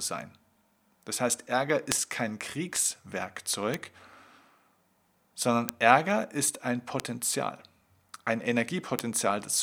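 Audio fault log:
1.92, 2.76, 3.74, 5.69, 7.00 (just after "ist ein") and 8.99 s: bit error spike. Each is one sharp, broadband tick that fits a flipped bit in a single sample or a few in a row. The value jumps by a power of two and snaps straight back. Peaks reach about -2 dBFS at 1.92, 5.69 and 8.99 s, about -14 dBFS at 2.76 and 3.74 s, and about -8 dBFS at 7.00 s.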